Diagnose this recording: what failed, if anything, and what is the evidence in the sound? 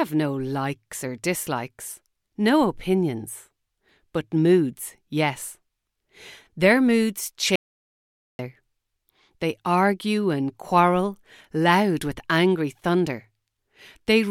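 Audio dropout to silence from 7.56 to 8.39 s: the speech stops dead into silence with no room tone, unlike a gate, likely from a lost input link.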